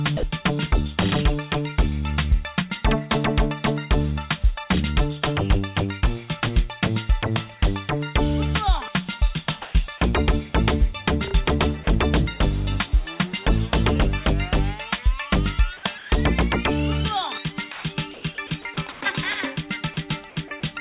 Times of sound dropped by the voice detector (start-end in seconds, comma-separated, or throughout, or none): 0.17-0.23, 17.72-17.84